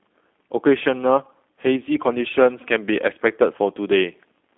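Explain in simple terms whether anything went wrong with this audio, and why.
Throughout the speech, the G.729 codec has left its mark. The voice is squeezed into a phone band of roughly 250 Hz to 3.5 kHz and sounds rough and synthetic. A simple band filter would dull it without this buzzy, rebuilt texture.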